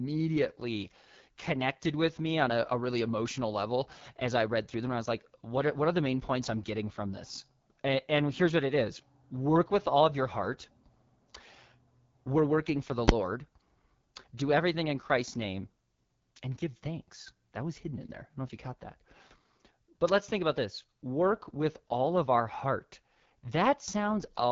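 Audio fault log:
Throughout: AMR wideband (HD Voice) codec. Speech sounds rough and raspy, nothing above about 7.3 kHz, fitting a low 8.85 kbit/s rate. Damage is plainly audible.
13.08 s: invalid numbers at full scale. A single loud bang. Invalid values forced the output to sit flat at one extreme value for a short block, which fits a 512-sample block.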